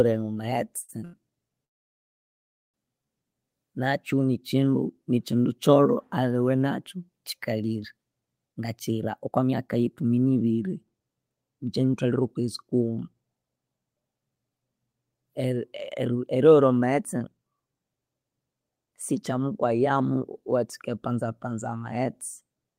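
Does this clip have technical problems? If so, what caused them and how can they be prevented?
Yes. Short stalls from late packets at 0.81 s and 1.05 s: the jitter buffer ran empty, so the sound was held for 72 ms and 87 ms until each packet arrived.

Call audio freeze from 1.65 to 2.76 s: the sound stops and goes almost silent for about 1.1 s before resuming where it left off, likely because packets were held up in transit.

Jitter buffer speed-up from 8.48 to 17.40 s, just after "kyolho aliwe nakyu kyikalire": the receiver trimmed pitch-period pieces to shed backlog, so speech runs at 114% speed, about one and a half seconds shorter.

A steadier network path with less jitter, prioritised voice traffic, and a larger adaptive jitter buffer would prevent these stalls, the freeze and the catch-up.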